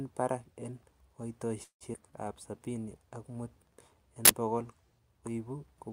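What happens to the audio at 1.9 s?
A brief buzz trails off into about 90 ms of silence from 1.63 to 1.84 s, then the speech resumes, likely a call audio freeze where the jitter buffer ran dry. Just after, at 1.93 to 1.97 s, speech jumps forward with nearly no gap; this skip ahead drops roughly 70 ms and joins both sides directly.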